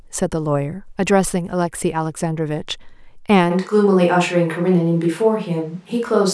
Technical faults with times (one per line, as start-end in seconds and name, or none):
3.52-6.33 switch to a distant microphone